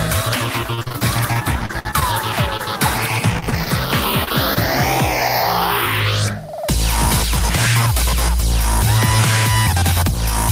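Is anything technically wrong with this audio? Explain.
Yes. There are two stretches of repeated packet loss (robotic sound), from 0.71 to 2.66 s (14 gaps, the longest 59 ms) and from 3.40 to 4.58 s (6 gaps, the longest 27 ms). Lost packets were patched by extending the preceding sound, so the audio turns choppy and robotic. Unlike a single dropout, the holes recur in quick succession.

From 9.75 to 10.15 s, a jitter buffer speed-up plays the audio at 107% speed. The receiver trimmed a total of about 40 ms in small pitch-period pieces to reduce delay, so the sound runs hurried while its pitch stays unchanged, unlike a pitch shift.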